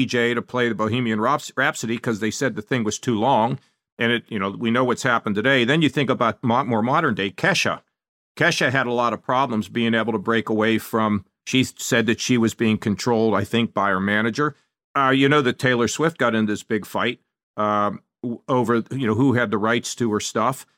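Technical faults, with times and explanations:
No technical faults are present in this clip.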